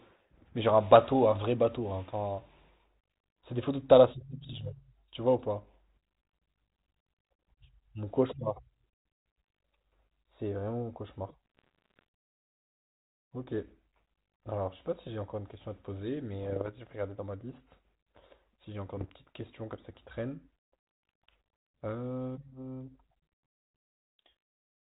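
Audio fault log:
4.42–4.67 s, 11.46–12.04 s, 16.39–16.70 s and 18.97–19.11 s: bit errors on an ADPCM link. The speech runs over a telephone-band ADPCM path whose light, band-limited hiss points to G.726 at 32 kbit/s. In these stretches a small share of bits get flipped, around half a percent, rising to about one percent in the last burst. Each bad bit throws off the decoder's step size and prediction, so you hear pops and rough, gravelly bursts with quick level jumps that take a few milliseconds to settle.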